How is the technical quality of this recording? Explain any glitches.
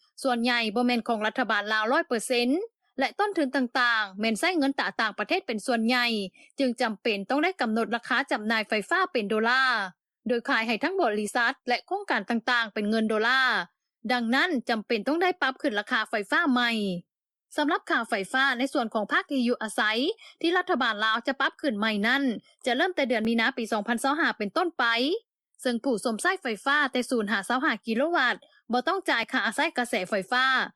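The recording has one recurring fault: overlap between stream segments. It appears as brief skips at 5.29, 11.28, 23.25 and 29.23 s. Each is a jump of about 5 ms. The timing follows a 6-second grid, which matches the segment length. Where one segment's time stamps overlap the next, the player trims the overlap. That discards a few milliseconds of real audio. The waveform then jumps discontinuously, heard as a small click or tiny skip in the sound.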